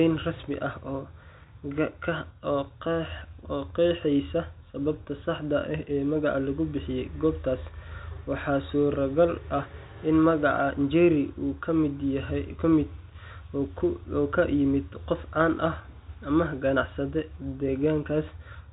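No technical faults can be heard anywhere in the speech. It carries the narrow sound of G.711 telephone coding, with nothing above 4 kHz and a faint noise floor that rises and falls with the level.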